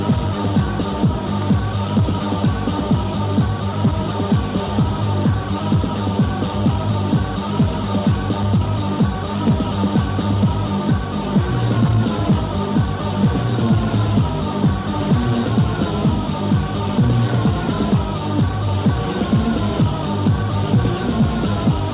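Nothing stood out as a problem on listening.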